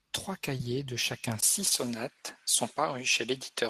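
At 0.57 s, short concealed packet loss: about 20 ms went missing and was filled by extending the preceding sound, heard as a brief smear and visible as a smoothed, repetitive patch in the spectrogram. From 1.41 s, after a 20 ms gap, the sound turns duller, likely from an input switched to a poorer device. The spectrogram shows nothing above 12.3 kHz and a faint new noise floor about 45 dB down. Two more concealed losses follow at 1.65 s and 1.69 s, the second stretching timing slightly.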